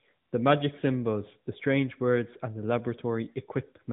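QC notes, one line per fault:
No faults found; the speech passes through an AMR narrowband mobile codec path, band-limited to about 3.8 kHz with light coding texture consistent with the 12.2 kbps mode.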